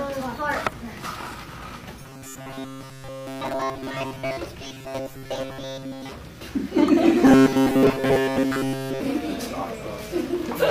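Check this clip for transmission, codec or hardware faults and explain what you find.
Robotic sound from repeated short buffers appears three times: 2.02–4.37 s, 4.63–6.11 s and 7.25–9.00 s. The sound turns into a rigid, metallic buzz pinned at 134 Hz. It still loosely follows the original. The likely cause is audio arriving too slowly, so the same fragment of roughly 7.5 ms is looped in place of most of the real signal. Unlike dropouts, there are no silent gaps. Unlike flanging, the pitch stays fixed rather than sweeping.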